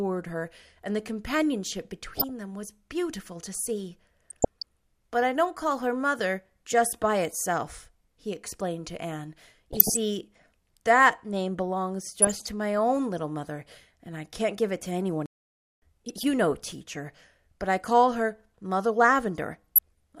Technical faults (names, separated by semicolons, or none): DAB burbling; playback stall